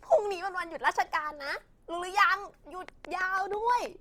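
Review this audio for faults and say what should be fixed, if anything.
Opus compression is plainly audible from start to finish. The audio stays fullband, with content reaching about 20.2 kHz, but tones come out rough and grainy rather than clean. This is likely Opus in its music (CELT) mode: short of bits, it keeps each band's energy and fills in the detail with folded or noise-like content, and the damage fits a low rate around 24 kbps. Prevent it by encoding at a higher bitrate or keeping a lossless master.

A train of clicks runs from 2.89 s to 3.87 s: regularly spaced ticks at about 6.2 per second, roughly seven in all, peaking about 10 dB above the surrounding signal. The clicks share much the same shape and sit on top of the sound, so they stay audible even where the sound drops away. The likely cause is a repeating pulse from interference by nearby equipment or a faulty connection or power supply. 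Prevent it by isolating the recording chain from such equipment and checking the power supply and its connections.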